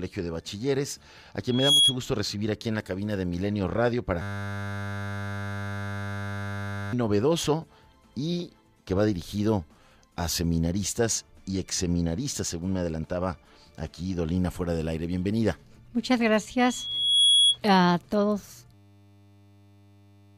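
At 1.48 s the microphone picks up its own loudspeaker and the loop gain passes unity at one frequency, producing a loudspeaker feedback squeal: a 3.3 kHz tone swells within about a third of a second to roughly 10 dB above the sound before dying at 1.96 s.

From 4.22 s to 6.93 s the system hangs while the audio hardware keeps replaying one 10 ms buffer. This system hang loop becomes a steady 100 Hz buzz, and about three seconds of sound are lost.

The same 3.3 kHz feedback squeal returns from 16.59 s to 17.58 s, this time building more slowly, over roughly 0.7 s, and again peaking around 10 dB above the sound.

At 18.74 s the system hangs again. The 10 ms loop buzzes at 100 Hz through to the end of the clip, swallowing about 1.5 s of sound.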